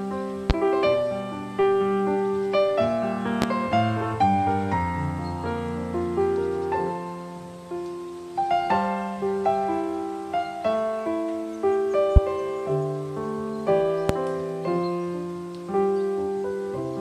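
Four loud pops, each a single sharp thump roughly 20 dB above the audio, land at 0.50–0.53 s, 3.42–3.45 s, 12.16–12.19 s and 14.09–14.13 s. The sound continues underneath rather than dropping out, which points to a likely voltage spike from a switch, static or driver glitch, not a gap.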